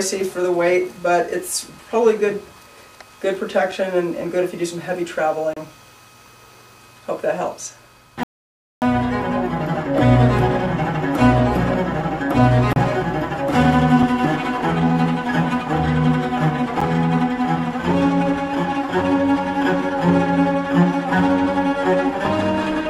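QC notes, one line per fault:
5.54 to 5.57 s, 12.73 to 12.76 s, 14.03 s, 16.81 s, block of digital silence: output samples were zeroed, likely because the buffer was not filled in time. Each abrupt cut to silence and back leaves 30 ms holes at the first two and ticks at the 4 ms and 10 ms gaps.
8.23 to 8.82 s, rebuffering stall: playback ran out of downloaded audio and paused until more arrived. The sound drops to silence for about 0.59 s, then resumes exactly where it stopped, so nothing is lost but time is added.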